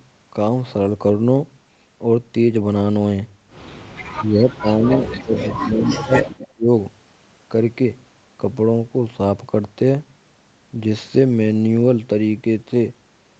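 A speech clip with call audio faults between 4.16 and 6.67 s. Speech suppressed in double talk dips the voice at 4.16–4.89, 5.06–5.35 and 5.55–6.67 s, by up to about 25 dB. The echo canceller likely ducked it while both sides talked. An echo leak adds a quieter repeat about 240 ms late at 4.9–5.55, 5.9–5.96 and 6.24–6.48 s, likely from loudspeaker pickup the canceller missed.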